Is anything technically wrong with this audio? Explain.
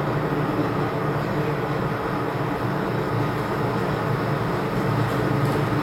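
Yes. Crude rate conversion runs throughout: the audio was taken from 48 kHz to 44.1 kHz by keeping the nearest sample and skipping the rest, with no filtering. That timing error makes inharmonic fizz around 30 dB below the signal. Unlike steady hiss, it tracks loud, bright moments.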